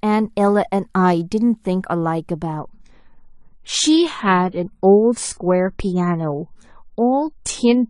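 Adaptive stream at a lower bitrate from 2.59 s to the end: the speech abruptly loses everything above 10 kHz and codec artefacts thicken, with no gap at the switch. This points to a stream stepping down from around 96 kbit/s AAC to roughly 24 kbit/s.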